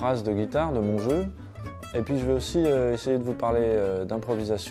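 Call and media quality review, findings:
No faults found.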